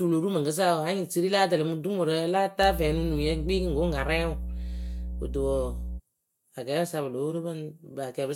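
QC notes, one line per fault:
2.6–6.01 s, mains hum: a steady 60 Hz tone with low harmonics rises under the speech, only about 5 dB below it, then stops. Power-line current is coupling into the signal path, most plausibly through a ground loop or a nearby transformer.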